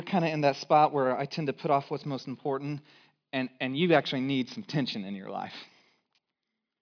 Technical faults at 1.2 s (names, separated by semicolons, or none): none